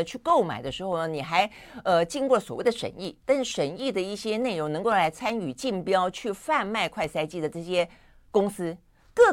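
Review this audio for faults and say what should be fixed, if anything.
Periodic USB or driver dropouts run from 0.17 s to 9.16 s: every 0.125 s a tiny slice of audio, about a tenth of a millisecond, is skipped as the driver stalls, leaving around seventy evenly spaced gaps, heard as ticks wherever speech is present. A spectrogram shows thin broadband vertical lines at that spacing, and the waveform shows small step discontinuities. To prevent this, move the interface to a dedicated USB port and disable the background task or power management that is interrupting the driver.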